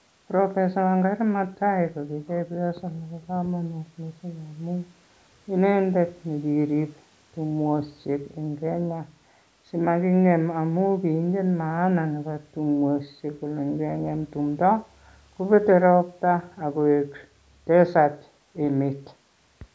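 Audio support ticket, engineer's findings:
No faults found; speech passes through call mic processing normally.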